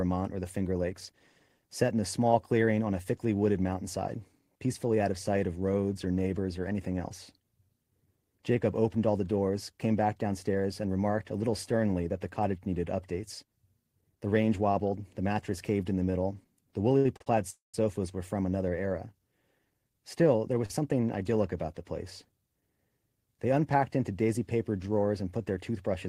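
At 16.97, 17.17, 17.22 and 20.66 s, short stalls from late packets hold the preceding speech sound for 35 to 73 ms with a slight buzz or dip, then resume without losing anything. At 17.50 to 17.75 s, a call audio freeze is longer. The held sound fades into about 140 ms of silence, likely from packets delayed in transit, before the speech continues intact.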